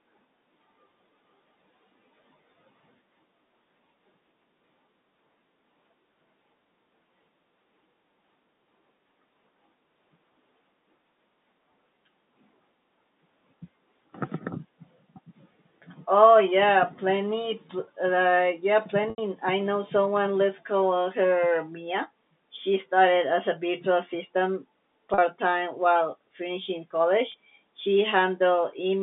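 Packet loss with pitch repetition hits three times: 19.1 to 19.18 s between "uh yeah" and "I know someone", 25.14 to 25.18 s, and 27.32 to 27.34 s after "while finishing". The receiver loops the last pitch period, so the 40 and 20 ms holes sound like a brief, buzzy held tone over the narrow telephone band, while the 80 ms hole fades into silence before the speech returns with a short cross-fade.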